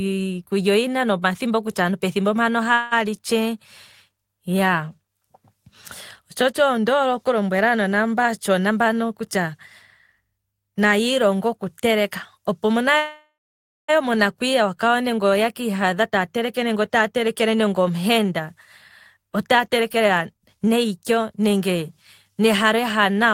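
At 2.73 s, just after "kutya aantu pethimbo ndino", the sound stretches into a brief fading buzz for about 0.18 s, then carries on with "li tshee" with nothing lost. This is a call audio freeze, likely from delayed packets that let the jitter buffer run empty, so the receiver extended the last sound and added that much delay.

From 8.66 to 9.54 s, after "oku lombwela aanona mbano", the speech sounds hurried at unchanged pitch, running at 112% speed. This is a jitter buffer speed-up: the receiver trimmed roughly a tenth of a second in tiny pitch-period slices to shed excess buffered delay.

At 12.97 s, after "oku teleka opo wo", a second call audio freeze sets in. A fading buzz decays into about 0.54 s of silence before the speech resumes at 13.90 s. The gap is 0.92 s in all, and nothing is missing. A buffer starved by held-up packets is likely again.

Two more jitter buffer speed-ups follow. 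From 16.00 to 18.53 s the speech runs at 112%, with roughly 0.3 s removed. From 19.17 to 21.82 s it rushes more noticeably at 123%, with roughly 0.7 s cut to pull the delay back down.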